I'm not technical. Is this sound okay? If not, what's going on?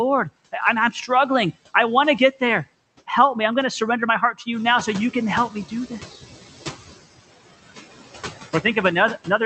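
No. Noise suppressor artifacts run through the whole clip. A filter strips the steady background noise, so the noise dips between words and swells under them. The room noise gets louder around four and a half seconds.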